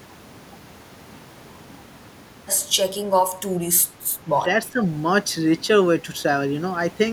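From 4.71 to 4.82 s the speech dips sharply, by roughly 10 dB, for about a tenth of a second. This is speech suppressed in double talk. Both ends were likely talking at once. The echo canceller mistook the talker for loudspeaker echo and turned the speech down.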